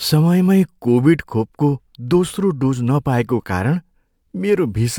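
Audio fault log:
No faults detected in the speech recording; nothing to log.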